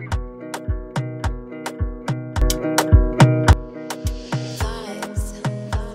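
The audio carries a sudden gain jump from 2.42 s to 3.53 s. The level rises by about 12 dB in a single step, and the background noise rises with it. It drops back just as abruptly. The likely cause is a gain setting applied without any ramp.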